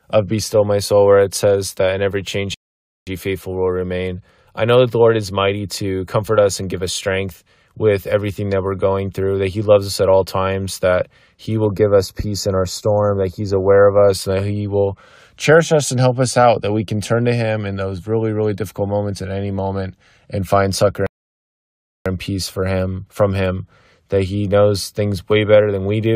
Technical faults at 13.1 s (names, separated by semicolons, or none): channel delay (comb filtering)